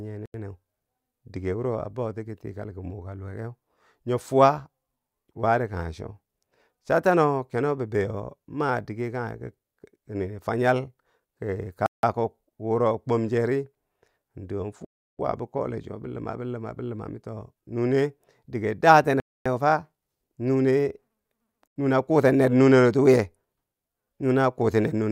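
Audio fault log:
0.26–0.34 s, block of digital silence: an 85 ms hole, likely as the output buffer went unfilled, which fits a 4096-sample block.
11.86–12.03 s, block of digital silence: a 171 ms dropout, ending abruptly just before "wuro kwom", consistent with an 8192-sample buffer.
14.85–15.19 s, block of digital silence: the longest gap, 341 ms, cutting in right after "in doo" with no fade; it fits a 16384-sample buffer.
19.20–19.46 s, block of digital silence: a 256 ms hole, the sound dropping straight out and back, likely because the buffer was not filled in time.
21.68–21.76 s, block of digital silence: an 85 ms hole, right before "nune a kuten ner", which fits another 4096-sample block left unfilled.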